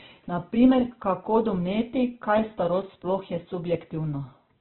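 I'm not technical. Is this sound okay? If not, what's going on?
No. From start to finish the speech sounds muffled, with a grainy, rough edge, and nothing above about 4.3 kHz survives. This is likely heavy Opus compression at a very low data rate, which narrows the sound to telephone-like bandwidth.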